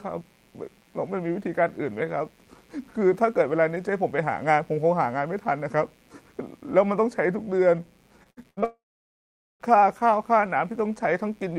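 It's a speech clip with a mains buzz running under the whole thing: a steady, raspy hum built on 60 Hz and its harmonics, sitting quietly, roughly forty decibels below the speech. That's mains interference leaking in through something like a dimmer, a rectifier or a poorly shielded cable. From 8.23 to 8.64 s there's repeated packet loss, giving the robotic sound. A handful of short holes, the longest about 67 ms, are patched by stretching the previous sound, so about 41% of that stretch is filled-in audio and it comes out choppy. Straight after, from 8.64 to 9.62 s, the sound smears into a fading tail and then goes silent for about 0.82 s before the speech picks up again with that chunk simply gone. That's likely a long network dropout, with nothing arriving for nearly a second.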